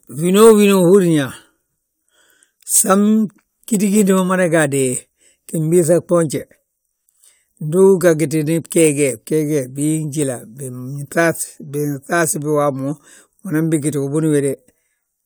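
Nothing in this bit of speech stands out as a technical fault; it just runs along without anything going wrong that you'd notice.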